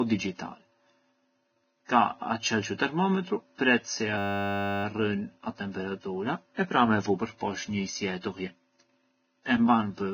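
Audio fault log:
throughout, Vorbis compression: The whole speech track sounds hissy and grainy. Nothing comes through above 6.5 kHz, so the top end is dull and cut off. What treble is left is quantised so coarsely that the fine detail turns into noise at about the same level, which roughens the tones and blurs the attacks. The damage is heavy and sounds like a Vorbis encoder at a very low setting, likely somewhere around 18 kbps.
2.78 and 8.21–8.23, pre-echo: Twice you get a short hiss just ahead of a sharp attack, about 17 ms of it at 2.78 and about 25 ms at 8.21. Here's why it happens. A transform codec spreads its quantisation noise across a whole block. When the attack lands late in that block, the noise meant for the loud part also fills the quiet stretch just before it. That leaves a short hiss in front and an onset that sounds soft and smeared.
4.18–4.84, system hang loop: For about two-thirds of a second the audio collapses into a steady buzz. 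A single 10 ms slice repeats exactly, around 66 times, so the loop rate of 100 Hz becomes the pitch you hear. This points to the computer or driver freezing while the sound hardware kept playing the same small ring buffer over and over. Essentially no audio is lost around it, so the sound resumes right where it stopped once the hang clears.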